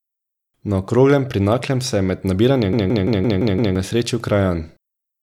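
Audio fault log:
2.73–3.76 s, system hang loop: a 0.17 s slice of the speech repeats exactly six times at 5.86 Hz, a machine-gun stutter from hardware cycling a frozen ring buffer (fits an 8192-sample buffer), losing about a second. The waveform and spectrogram show identical blocks tiled edge to edge.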